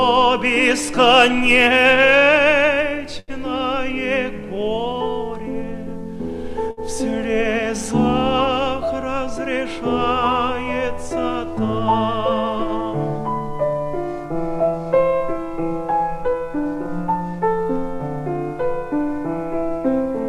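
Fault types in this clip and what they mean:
Short stall from a late packet: at 3.19 to 3.31 s and 6.71 to 6.80 s a packet arrived late, the jitter buffer ran dry, and the last sound was stretched for 85 ms and then 62 ms before playback resumed where it left off, with nothing lost.
Jitter buffer speed-up: from 16.12 to 16.88 s the receiver trimmed excess buffered audio by repeatedly cutting pitch-period-sized slices, removing about a tenth of a second. The sound plays at 112% speed with unchanged pitch, so it comes across briefly hurried.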